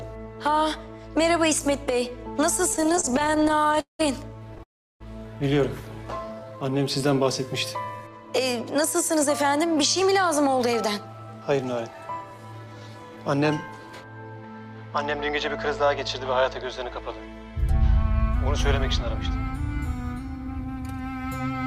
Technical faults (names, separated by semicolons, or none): repeated stalls (stutter); call audio freeze; jitter buffer slow-down; jitter buffer speed-up